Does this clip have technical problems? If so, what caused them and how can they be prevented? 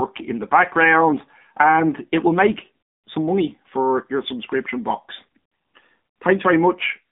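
Yes. AMR narrowband mobile codec damage runs throughout. Nothing passes above 3.7 kHz, and the vocal-tract model sounds buzzy and synthetic, which fits a low mode near 7.4 kbps. Prevent it by recording locally or using a wideband codec at a higher bitrate.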